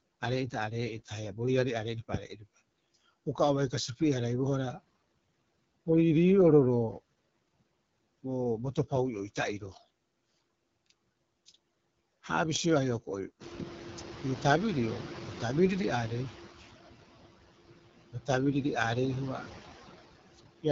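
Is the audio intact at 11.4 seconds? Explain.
No. At 11.4 seconds the speech carries two faults that run through the whole clip. The first is noise suppressor artifacts. A suppressor judges, frame by frame, which frequency bands hold steady background noise and turns them down, here by about 17 dB. The gain keeps shifting, so the leftover noise pumps around the speech, sinking between the words and rising under them.

The second is the AMR wideband (HD Voice) codec. It rebuilds speech from a model of the vocal tract driven by pulses, and it carries nothing above 7 kHz. The top band is filled with shaped noise instead of real detail. The damage is plainly audible. The voice sounds rough and raspy, which fits one of the codec's lowest modes, around 8.85 kbit/s.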